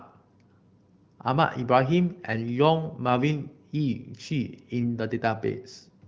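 Nothing in the speech recording shows a technical fault; its top end stops around 7 kHz, which points to wideband AMR (HD Voice) coding at one of its higher rates.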